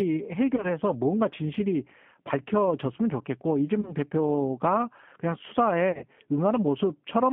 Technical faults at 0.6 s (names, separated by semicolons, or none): G.729 codec; VoIP packet loss concealed by the speech codec